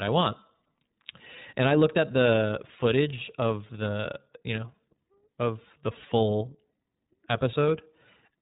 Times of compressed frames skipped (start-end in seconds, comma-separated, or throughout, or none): none